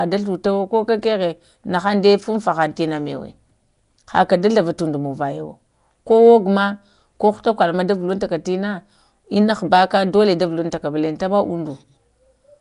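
Speech throughout carries a rough, hissy halo and smeared underwater quality with nothing above 10.6 kHz, likely Nellymoser compression, noise-filled bands distinguishing it from MP3's swirling.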